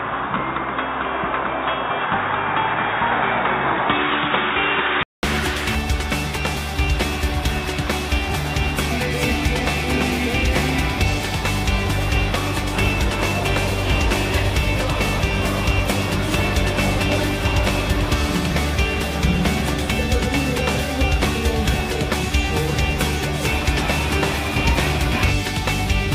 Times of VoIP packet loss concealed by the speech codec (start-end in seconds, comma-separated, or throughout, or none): none